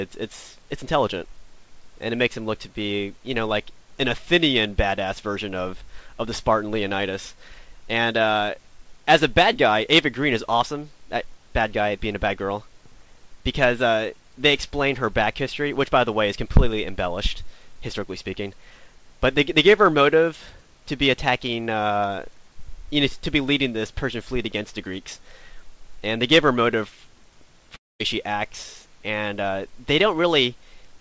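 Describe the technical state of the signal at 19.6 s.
At 19.6 s the audio is intact, with no dropout, glitch or distortion, only the steady band limit of the call path, with nothing above 8 kHz, which fits a wideband codec such as G.722.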